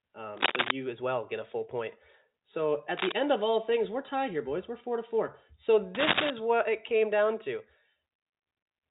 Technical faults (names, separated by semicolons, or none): cable scratch noise; packet loss with pitch repetition